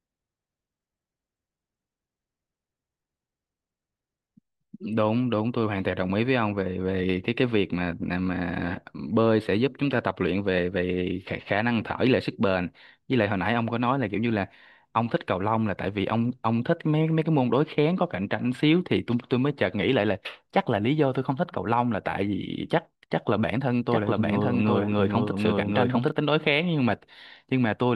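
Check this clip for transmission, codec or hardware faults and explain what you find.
There's one fault, a doubled audio track. From 23.90 to 26.12 s a second full-level copy trails roughly 0.7 s behind, likely a slower capture path, and it starts and stops abruptly.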